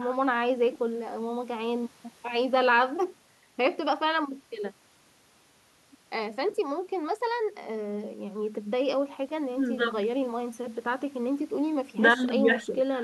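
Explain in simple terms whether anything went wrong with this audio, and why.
Nothing went wrong: no faults can be heard anywhere in this speech recording.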